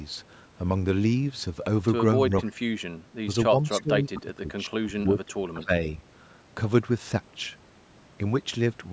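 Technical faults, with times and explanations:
2.29 to 5.81 s, speech suppressed in double talk: the level dips in four patches, at 2.29 to 2.6, 3.48 to 3.62, 3.81 to 4.49 and 4.68 to 5.81 s. It drops about 20 dB at worst, and only about 10 dB at 3.48. This is likely the echo canceller ducking both sides while they overlapped.
2.44 to 2.5 s, echo leak: a faint scrap of the voice comes back 263 ms late, about 30 dB under the speech. The likely cause is the far end's loudspeaker audio slipping past its echo canceller and being returned down the line.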